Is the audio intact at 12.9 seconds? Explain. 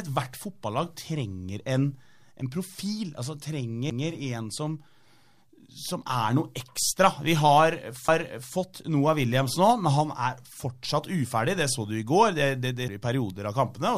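No. At 12.88 s a CD skip makes the laser jump to another turn of the spiral, so the speech briefly mutes with a tick and resumes from a different point.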